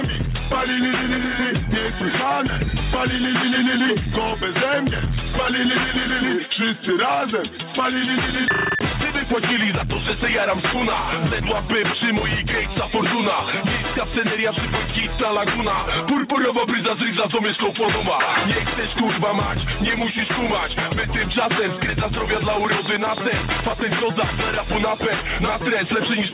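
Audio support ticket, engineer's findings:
Gain pumping, throughout: level swings by about 5 dB, dipping on each loud sound and recovering after. Tracks loudness, unlike random fading. Likely mic gain set too high, fast limiter pulling it down.

Train of clicks, 22.65 to 24.04 s: around 15 same-shaped clicks at a regular 9.4 per second, about 10 dB above the signal. Clicks are added on top with no gaps, unlike dropouts. Likely interference or a faulty connection or supply.

Band-limited to 4 kHz, consistent with G.711 mu-law at 64 kbps on the call path.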